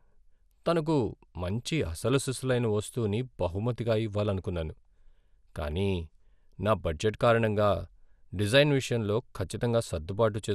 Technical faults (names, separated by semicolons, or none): MP2 compression